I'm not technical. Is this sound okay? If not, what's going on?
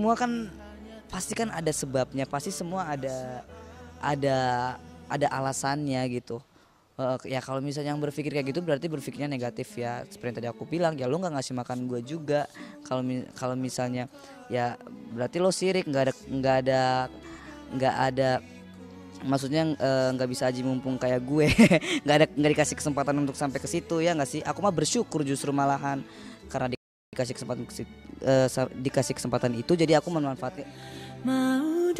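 No, there's one hiccup. At about 26.75 s the sound drops to silence and picks up again at 27.13 s, right where it left off. That's a rebuffering stall: the player ran out of downloaded audio and waited for more. Nothing goes missing; it just adds about 0.38 s.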